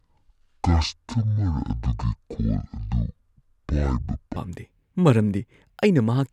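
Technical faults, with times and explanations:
0.00–4.36 s, section at the wrong speed: the speech runs at 0.55 times its proper rate, so it drags and sits about ten semitones low, likely from playback against the wrong clock. A spectrogram shows harmonics squeezed downward, and the waveform's cycles look stretched until normal speed resumes.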